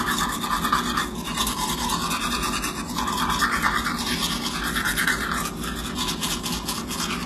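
Throughout, the upper range sounds bright yet gritty and metallic, with plainly audible damage and nothing above about 12.3 kHz. This is likely HE-AAC compression at a very low bitrate, around 16 kbps, where treble is rebuilt by copying lower bands upward rather than coded directly.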